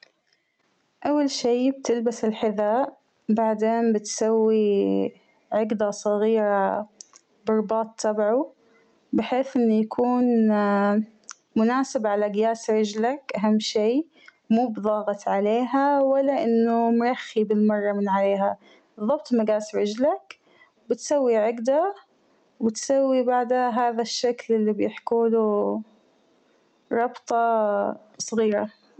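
Input gain is likely far too high, so a fast limiter clamps every loud sound throughout: gain pumping, with the gain swinging around 15 dB.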